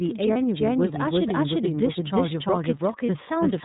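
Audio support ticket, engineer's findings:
Doubled audio track throughout: full-band second copy at roughly equal level, about 0.3 s behind, with no decay or room colour. Likely a second, slower capture path or a misaligned edit.

iLBC codec throughout: nothing above 4 kHz, speech plainly rough and synthetic. Narrowband VoIP coding, with per-frame excitation that fits the 30 ms frame mode.

Lost iLBC frames at 0.33–0.37 s and 3.06–3.10 s: brief held, buzzy vowel, 30 ms each. Decoder repeated the last pitch cycle with noise, then recovered immediately.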